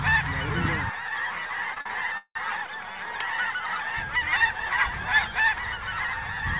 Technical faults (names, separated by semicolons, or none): repeated stalls (stutter)